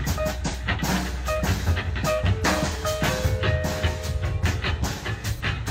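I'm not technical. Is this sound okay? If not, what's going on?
No. There are short smeared, noisy or phasey blips at 0.48, 2.70 and 5.35 seconds. This is AAC frame loss with concealment: small chunks went missing, and the player patched each gap using the sound just before it.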